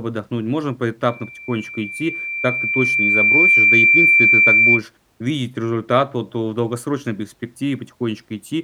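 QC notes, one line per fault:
1.08–4.83 s, loudspeaker feedback squeal: a single tone at 2.4 kHz swells over roughly two seconds to about 10 dB above the speech, because the microphone is hearing its own loudspeaker and the loop gain at that frequency exceeds one, so it keeps reinforcing itself.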